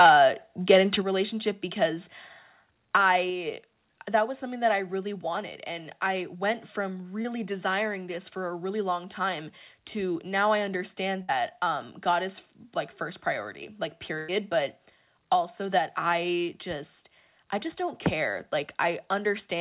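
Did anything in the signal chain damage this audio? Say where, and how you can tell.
Yes. At the converter stage, the start of the clip is marred by what is likely microphone overload. From 0.0 to 0.11 s and again from 0.7 to 0.95 s, the loudest peaks flatten against the converter's limit, driven about 3 dB past it. In the first stretch a sizeable share of samples are cut flat, and in the second only a small fraction. The squared-off tops give those peaks a harsh, crackly edge.

In the call processing, the microphone volume stepped down twice, likely as an automatic gain control would when it reacts to clipping. At 1.02 s, right after the second distorted stretch, the whole signal, voice and background alike, drops by about 6 dB in one step. At 3.3 s it falls again by about 3 dB. Both changes are sudden level shifts, with no fade between them.

On the network side, one short concealed packet loss sits at 7.22 to 7.26 s. 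About 20 ms of audio never arrived in time, and the receiver filled roughly 22 ms by extending the last sound before blending back into the real signal. You hear a brief smear or wobble there, and a quick consonant could be swallowed.

Two bursts of packet loss follow, at 11.22 to 11.30 s (about 60 ms missing) and 14.18 to 14.30 s (about 100 ms missing). In each, the decoder kept extending the last sound while fading it down. That leaves a held buzz on voiced sounds or a dying hiss on others. The speech then resumes further on, with the stretch in between gone. All of this rides on narrowband call audio with nothing above 4 kHz, which fits a G.711-type telephone codec.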